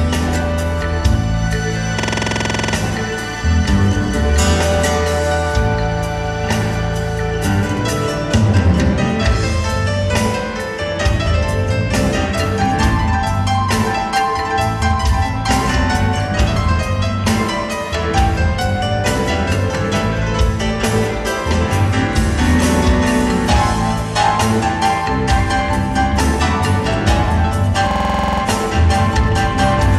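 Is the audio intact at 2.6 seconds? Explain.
No. A system hang loop runs from 2.00 to 2.74 s, covering 2.6 s. The machine stalled while the sound hardware kept replaying the same stretch of its ring buffer, so a 46.44 ms fragment, consistent with a 2048-sample buffer, repeats 16 times. Cycling at 21.5 Hz, it produces a rapid, rattling stutter in place of moving sound. When playback resumes, essentially no audio appears to be missing.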